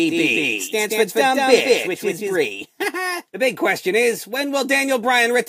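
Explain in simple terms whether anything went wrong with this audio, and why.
From the very start until 2.36 s, everything sounds twice, an equally loud copy trailing about a fifth of a second behind: a doubled audio track, likely from an out-of-step second recording.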